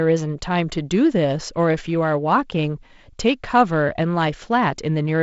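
Nothing goes wrong anywhere in this bit of speech: it's simply carried over G.722 wideband telephone coding at what sounds like 48 kbit/s, so the top end stops at about 7 kHz and the coding leaves only a light trace on the sound.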